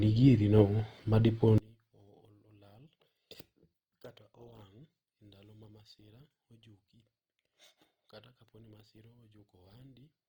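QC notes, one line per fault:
Throughout: Opus compression. Tones sound grainy and rough rather than swirly, with bands filled in by noise instead of left empty, yet content still extends to about 20.3 kHz. This is likely a fullband music-mode encode at a low rate, around 24 kbps.
1.58–10.28 s: one channel inverted. From here to the end, one stereo channel likely has reversed polarity, so the centred speech largely cancels when the two are summed to mono. The level falls by about 32 dB, leaving only a faint residue of the channel difference.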